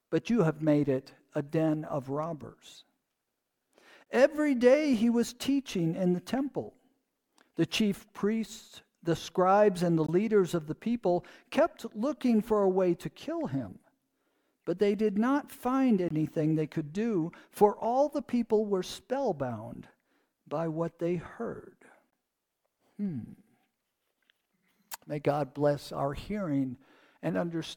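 Four short holes with hard edges cut into the sound, at 4.04 to 4.06 s, 10.06 to 10.08 s, 16.08 to 16.10 s and 22.10 to 22.12 s. Each is a 20 ms dropout that arrives every 6 s. This is a gap between chunks. The audio was handled in 6-second blocks, and a small stretch of silence was inserted at each join. No sound is missing; the flow simply stops and restarts abruptly at each boundary.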